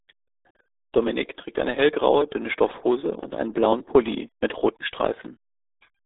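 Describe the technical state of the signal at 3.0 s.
At 3.0 s, as throughout, the speech carries RealAudio 14.4 codec damage: a muffled band with nothing above 3.8 kHz, plus gargly artefacts that a plain telephone filter wouldn't add, fitting roughly 8 kbit/s coding.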